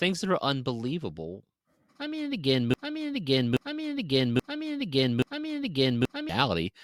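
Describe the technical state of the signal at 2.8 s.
At 2.8 s the speech is caught in a broken-record loop: an identical 0.83 s fragment repeats back to back four times from 2.74 s to 6.29 s, likely a stalled player or stream resending its last buffered piece.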